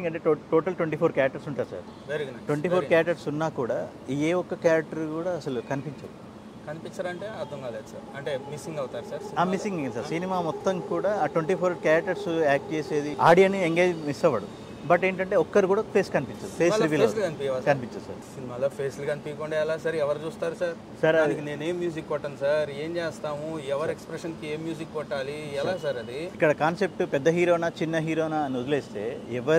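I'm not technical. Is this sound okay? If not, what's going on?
Yes, there's nothing technically wrong with this recording; the signal holds steady throughout without any breaks, distortion or glitches to point to.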